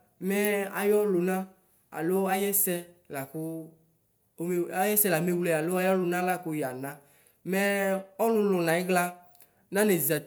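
Speech, with nothing technically wrong in it.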